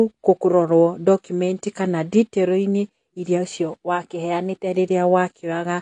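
Throughout, the speech has likely passed through AAC compression at a low bitrate, around 32 kbps. The high-frequency cut-off is lowered, leaving it dull with plainly audible coding damage.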